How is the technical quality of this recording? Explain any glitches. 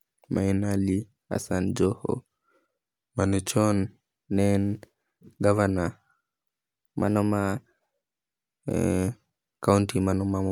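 The speech has two brief pitch-and-speed glitches. From 2.95 to 3.49 s it drops about a semitone and slows 6.5%, then snaps back. From 7.04 to 8.35 s it rises about a semitone, 6.5% faster. Both are likely a drift correction step: clock-matching software abruptly changing the playback rate to rebalance its buffer.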